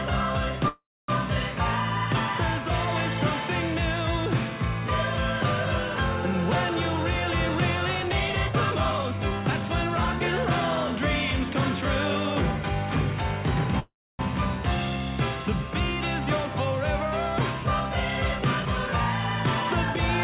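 A call audio freeze at 0.68 s lasts until 1.10 s. The likely cause is packets held up in transit, draining the jitter buffer, so the receiver extends the last sound as a fading buzz that drops to silence for about 0.27 s of the 0.40 s fill. Nothing is lost, but the rest of the audio arrives 0.40 s late.

A jitter buffer speed-up follows from 7.95 s to 10.21 s. With too much audio queued, the receiver repeatedly removes short pitch-period slices, running the sound at 116% speed without any pitch change and cutting roughly 0.4 s, so it feels hurried.

A second freeze at 13.79 s to 14.21 s has the same fading fill, about 0.28 s of silence within a 0.40 s gap, and another 0.40 s added delay.

A shorter speed-up from 18.38 s to 18.89 s runs at 117% and trims about a tenth of a second. Throughout, the narrow call band stops at 4 kHz, which fits G.711 at 64 kbps.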